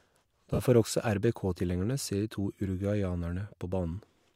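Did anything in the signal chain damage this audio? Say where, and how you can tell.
Yes. Lost LE Audio frames on the Bluetooth link damaged the speech from 0.54 to 0.60 s, a gap of about 50 ms just before "får også", which fits five 10 ms LC3 frames. The decoder filled the hole by replaying the last spectrum with randomised phase signs, so the voiced sound smears into a brief noisy buzz instead of dropping to silence or clicking. That distinguishes concealment from a plain dropout or buffer underrun.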